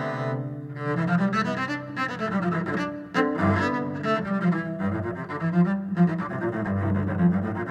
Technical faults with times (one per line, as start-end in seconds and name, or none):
none